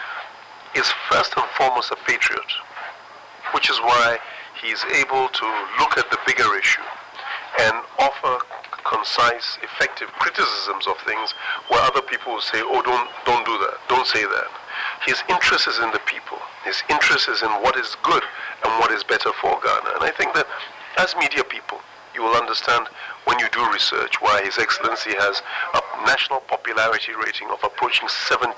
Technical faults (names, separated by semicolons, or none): none